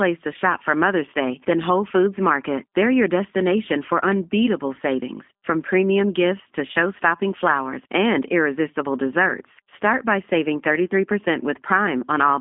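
From start to finish the speech sounds narrow, slightly rough and synthetic, with nothing above about 3.7 kHz, the band running roughly from 200 Hz to 3.6 kHz. This is plainly audible G.729 codec damage. The codec, here the G.729A variant, rebuilds each 10 ms frame from a vocal tract filter, a pitch predictor and a few pulses rather than the real waveform, which fits an 8 kbit/s telephone link.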